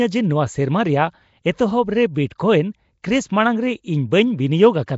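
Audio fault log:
Throughout, Nellymoser compression: a rough, hissy halo and smeared underwater tone, with nothing above 7.7 kHz, likely a Nellymoser stream around 32 kbps.
2.38 s and 3.02 s, pre-echo: a brief hiss of 15 and 19 ms leaks in just before sharp onsets, because block-wide coding noise spills ahead of each attack.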